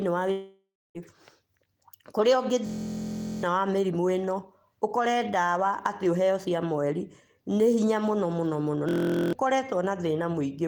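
A speech clip with two kinds of fault. From 0.31 to 0.98 s, the sound smears into a fading buzz, then silence, and about 0.64 s is gone, likely a long network dropout. At 2.66 to 3.43 s and 8.89 to 9.33 s, a system hang loop repeats a 23.2 ms piece, giving a steady 43.1 Hz buzz that fits a 1024-sample buffer. Roughly 0.7 s and 0.4 s of speech are lost.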